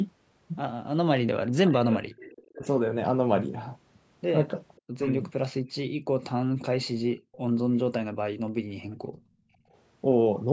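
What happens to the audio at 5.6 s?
Background gated by the echo canceller, from 5.63 to 6.08 s. While the far end was playing through the loudspeaker, the call's echo canceller clamped the microphone down hard to keep that playback from returning as echo, and the room sound went with it. The background ducks by about 40 dB at its deepest, so for roughly a third of a second the ambience all but vanishes, then returns as the canceller releases.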